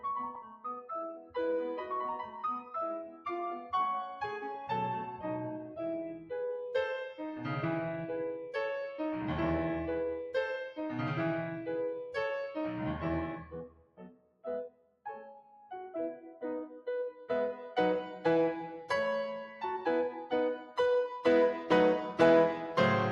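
A noise suppressor built for speech was left running on this music, and throughout it treats sustained tones and ambience as unwanted noise. It keeps pulling held material down by a swing of about 5 dB while attacks pass, so the level breathes and pumps under the music and reverb tails feel thinner than the playing that produced them.

In places the suppressor misjudges the music badly enough to cut it hard, and the sound cut by the noise suppressor dips audibly. Short dips occur at 0.42 to 0.65 s (about 12 dB down), 1.17 to 1.36 s (about 11 dB) and 3.08 to 3.26 s (about 10 dB). Near the middle the cuts run longer, and the first two deeper: 13.37 to 14.46 s and 14.68 to 15.06 s each sink by about 18 dB, then 15.26 to 15.71 s by about 11 dB. Across this stretch sustained sound drops away and decays are chopped short.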